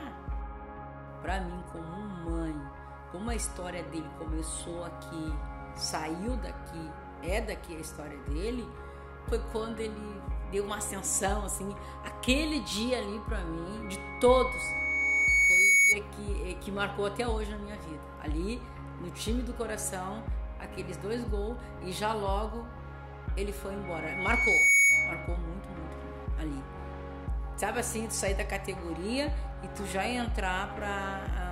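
A piercing 2.2 kHz tone swells out of the sound from 13.82 to 15.99 s over about two seconds, then again from 23.84 to 25.38 s in about a second, peaking roughly 15 dB above the sound. This loudspeaker feedback squeal occurs when the microphone picks up its own loudspeaker and the loop's gain tops one at 2.2 kHz.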